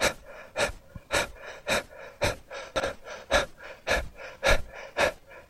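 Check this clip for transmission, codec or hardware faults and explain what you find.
One transmission fault stands out. Chunks out of order, 2.76 to 2.84 s: a 40 ms chunk of audio arrived one chunk late and plays after the chunk that should follow it. Nothing is missing, but the swapped order leaves three hard joins, heard as a brief jumbled stutter.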